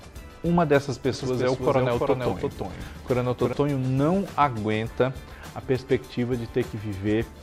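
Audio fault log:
1.13 to 3.53 s, doubled audio track: a second, full-band copy of the sound runs about 300 ms behind the original at roughly 5 dB lower, so every onset is followed by a repeat a third of a second later. The copy carries no decay or added room colour, which separates it from a reflection or reverb, and it switches in and out abruptly at both ends. The likely cause is the same signal being captured twice, once through a slower path.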